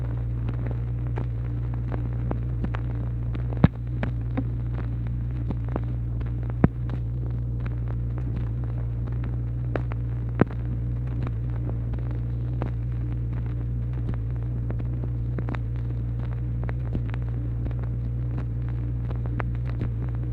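Nothing in the sound stood out as a technical problem on listening.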